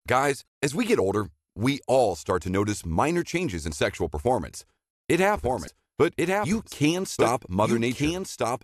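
At 0.45 to 0.47 s, just before "as we get older", a short glitch marks damaged data in a compressed stream. Corrupted bytes make the decoder misread frames and resynchronise. A second such blip occurs at 5.65 to 5.68 s.

From 5.36 s to the end, a doubled audio track appears: a full-band copy of the speech trails about a second behind, roughly 5 dB quieter, with no room colour, cutting in abruptly. A second, slower capture path is the likely cause.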